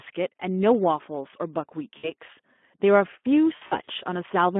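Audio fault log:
throughout: Speex codec. The speech is hoarse and grainy, with a plainly audible rasp, which fits a Speex rate of about 11 kbps. CELP coding at this rate has too few bits to rebuild the excitation cleanly, so the buzz underneath the voice turns noisy. The sound sits in a telephone band of 200 Hz to 3.4 kHz, so there is no hissy upper fill.
1.97–2.12 s and 3.55–3.90 s: VoIP packet loss concealed by the speech codec. At 1.97 s about 60 ms of audio is missing. Instead of a gap, the decoder repeats its last pitch and filter, so the voice stretches into a buzzy tone or coloured noise that fades. The second stretch scatters 140 ms of losses over about 320 ms, with no single gap longer than 60 ms, giving repeated smeared patches. The voice stays weak and distorted briefly after each gap, unlike a clean dropout or click.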